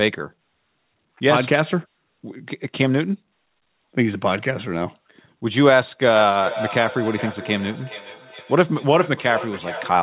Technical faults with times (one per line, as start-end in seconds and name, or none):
6.15-10.02 feedback echo between two devices